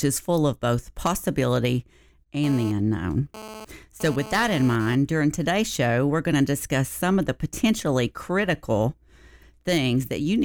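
From 2.44 to 4.95 s there's GSM phone buzz: a harsh 217 Hz rasp, about 15 dB under the speech, from a nearby handset's data-transfer bursts.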